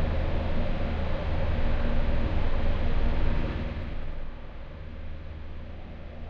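From 3.48 to 4.28 s, a gain reduction is applied in unsmoothed 2 dB jumps, about ten per second, pulling the level down by roughly 10 dB. Each jump clicks, so this zipper noise rides on the sound as a rapid ticking during the fade.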